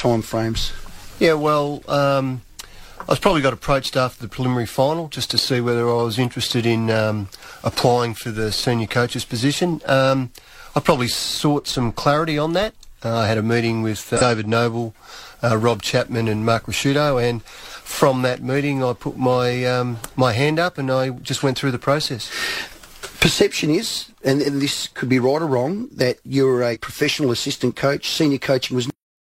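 Damaged data in a compressed stream appears at 14.17 to 14.21 s and again at 26.71 to 26.77 s. Corrupted bytes make the decoder misread those frames and lose sync while it hunts for the next valid header, leaving a brief chirp or squawk of about 45 and 64 ms. A cut-off end follows at 28.9 s, where the final buffers were never written out. The sound stops mid-event and drops straight into digital silence with no natural decay.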